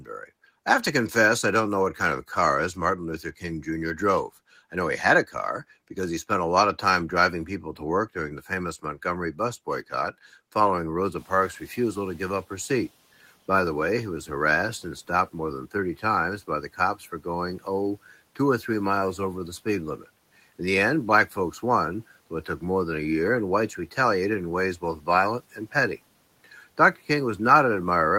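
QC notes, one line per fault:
0.0–0.1 s, speech cut by the noise suppressor: the opening of the speech is pulled down by up to about 11 dB for roughly a tenth of a second, so the first sound comes in faint and swallowed. The suppressor had not yet separated speech from background and treated the quiet onset as noise. On the waveform the first envelope rises late and thin. On a spectrogram the speech energy is dimmed at the very start.
11.17–12.88 s, noise suppressor catching up: around 11 s the room noise jumps by about 22 dB. For the next 1.71 s it comes through with less reduction, then sinks by about 8 dB as the suppressor's noise estimate adapts to the new level. Once settled, the noise sits about 29 dB below the speech. A spectrogram shows a broadband floor that brightens at 11 s and then fades over those 1.71 s. The waveform shows a thickened baseline between phrases that gradually narrows.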